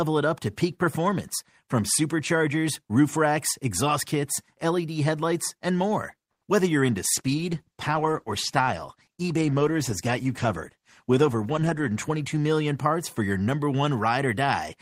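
A call audio freeze runs from 6.31 to 6.43 s. The speech stops and about 100 ms of silence is inserted, then resumes where it left off, with nothing missing. The stream is pushed later by that same 100 ms. The likely cause is packets held up in transit, so the jitter buffer ran dry and the receiver had nothing to play until they arrived.

A call bitrate drop starts at 7.14 s and lasts until 12.99 s. The encoder's rate falls from 32 kbps to 14 kbps and stays at that floor for about 4.9 s. The bandwidth estimate collapsed, so Opus had far fewer bits to spend. It quantised the speech coarsely and trimmed the top end, giving a muffled, rough, watery sound until the rate climbs back.

A jitter buffer speed-up overlaps that stretch, from 11.09 to 12.1 s. Playback runs at 110% speed while the pitch stays unchanged, so the speech sounds hurried. The buffer was holding more audio than its target. 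To shrink the delay, the receiver cut out short pitch-period pieces again and again, roughly a tenth of a second of audio in total.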